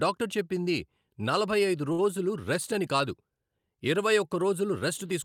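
At 1.92 s the speech stalls briefly until 1.99 s. This is a short stall from a late packet. The jitter buffer ran dry, so the receiver held the last sound for about 60 ms. Nothing is lost. The speech resumes 60 ms later, with a faint buzz or dip.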